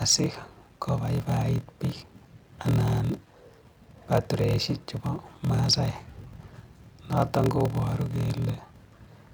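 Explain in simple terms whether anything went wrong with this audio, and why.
Something did go wrong, and it lasts the whole clip, from the first second to the last. The speech carries a low, steady buzz at about 41.7 Hz and plays slower than it should, at roughly 0.89 times normal speed, yet the voice keeps its usual tone. This is a block size mismatch (padded). One stage hands over shorter chunks of audio than the next one expects, which fits 1024-sample blocks, and the gap in each chunk is filled with silence. Those tiny silent gaps repeating many times a second make the buzz and stretch the timing.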